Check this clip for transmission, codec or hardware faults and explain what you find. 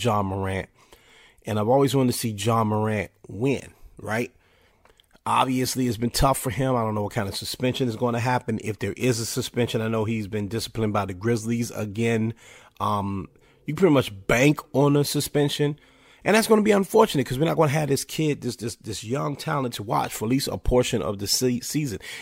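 No faults can be heard.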